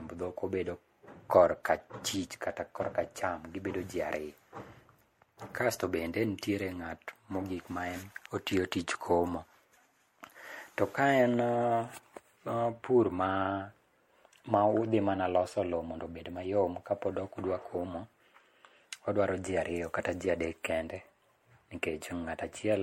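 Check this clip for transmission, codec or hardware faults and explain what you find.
The speech carries one fault, present throughout: generation loss. It sounds swirly, hollow and smeared, with blurred consonant attacks and nothing above 16.5 kHz. The likely cause is repeated MP3 re-encoding, around seven passes at a rate fitting 64 kbit/s, each requantising on a shifted frame grid. On a spectrogram this appears as a hard ceiling plus accumulating holes and speckled noise.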